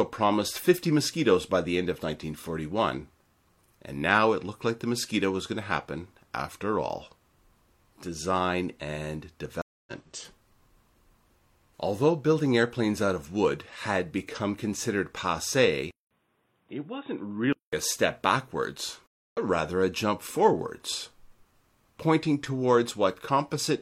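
At 9.62 s there's a stream reconnect: the sound drops out for about 250 ms, then a fresh decoder picks up roughly a third of a second further on, so a short stretch simply goes missing.

From 15.91 to 17.73 s, just before "a step backwards", there's a 200 ms gap and then the sound turns dull and boxy. Nothing comes through above 3.8 kHz, it's about 5 dB quieter, and a new noise floor sits around 45 dB down. That's likely an input switched to a poorer device.

The second reconnect hits at 19.06 s, between "a step backwards" and "rather a jump forwards": about 260 ms of silence, then it resumes roughly 0.15 s later.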